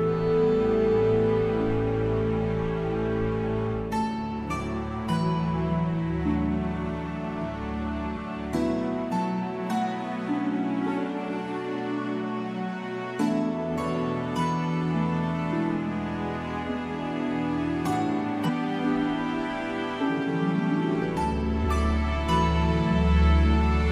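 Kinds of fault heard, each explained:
Damaged data in a compressed stream: short blips at 8.13–8.18 s, 18.44–18.50 s and 21.60–21.65 s, where corrupted frames are misdecoded and the decoder loses sync briefly.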